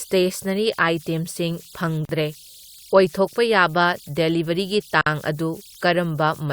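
A short piece of speech with two problems. Throughout there are converter idle tones: an undithered delta-sigma converter settles into repeating bit patterns on low-level input, leaving tones somewhere around 4 kHz in the pauses and grain under quiet passages, sitting about 27 dB below the speech. Then there are two gaps at joins of encoded pieces, from 2.05 to 2.09 s (about 41 ms) and from 5.01 to 5.06 s (about 51 ms). The speech drops out with smeared edges and resumes right where it left off, which is what you get when separately encoded chunks are spliced without trimming the encoder's start delay and end padding.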